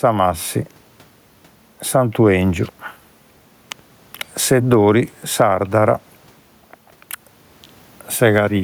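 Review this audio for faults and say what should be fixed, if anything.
Gain pumping runs through the whole clip. The input gain is likely set far too high, so a fast limiter clamps down on every loud syllable and lets go in the pauses. The room noise sits about 43 dB below the speech, the gain swings by roughly 10 dB, and the speech is left squashed and flat in level. Lowering the input gain so that peaks stay well under the limiter's threshold would prevent it.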